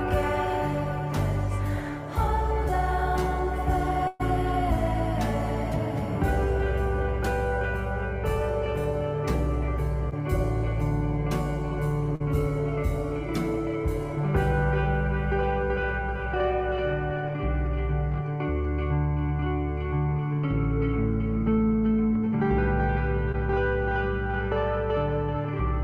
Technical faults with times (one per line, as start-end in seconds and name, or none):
4.07-4.21 burst of packet loss
10.09-10.13 short concealed packet loss
12.15-12.22 short concealed packet loss
23.32-23.35 short concealed packet loss